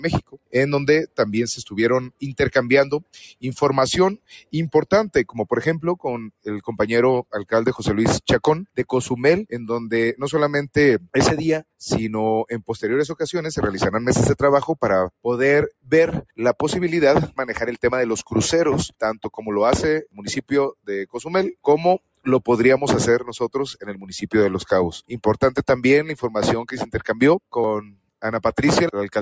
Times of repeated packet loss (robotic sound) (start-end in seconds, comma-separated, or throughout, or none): none